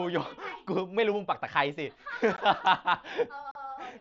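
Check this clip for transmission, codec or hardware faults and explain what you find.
Two brief dropouts in the speech, both unconcealed Bluetooth headset packet loss. At 2.37 s, and again from 3.51 to 3.55 s (about 37.5 ms), the sound cuts out abruptly. Lost headset voice packets were replaced with silence or an idle pattern rather than concealed. The mSBC wideband link adds only light graininess.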